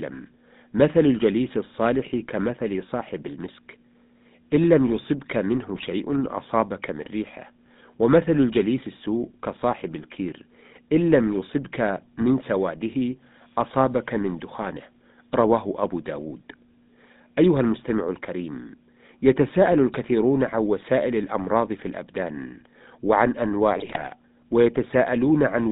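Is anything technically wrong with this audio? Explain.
Yes. Throughout, the speech sounds buzzy and gravelly, confined to roughly 150 Hz to 3.7 kHz: GSM full-rate codec coding, which fits 13 kbps, rebuilds the voice from a vocal-tract model driven by sparse, regularly spaced pulses.

From 5.75 to 5.87 s and from 23.76 to 24.13 s, the voice bursts into squawks, pops and gargling. These are GSM bit errors: corrupted filter, pitch and gain values distort each damaged frame. The later burst lasts longer.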